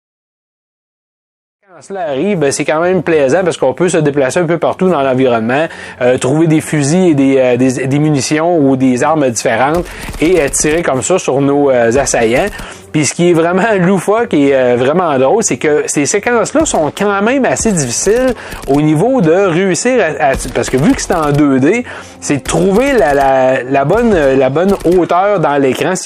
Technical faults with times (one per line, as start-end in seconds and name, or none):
none